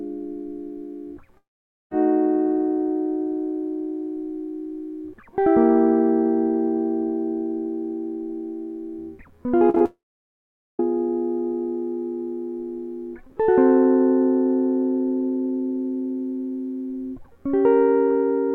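At 1.37 s the music cuts out until 1.92 s, likely a long network dropout. A brief fading buzz or hiss gives way to silence, and that music is lost. At 9.70, 9.75 and 9.78 s comes short concealed packet loss. Gaps of 10 to 40 ms are patched by extending the sound, heard as quick smears. Then from 9.86 to 10.80 s a second, likely long network dropout leaves about 0.8 s of silence before playback resumes.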